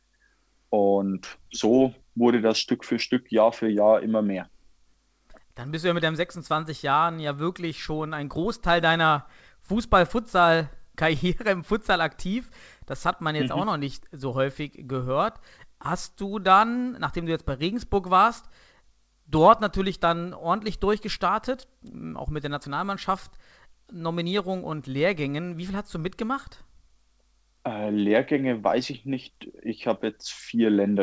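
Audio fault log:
The speech came over a WebRTC call path using the G.722 codec at 64 kbps, which leaves nothing above 8 kHz and adds that codec's ordinary coding noise, and no fault can be heard anywhere in the signal.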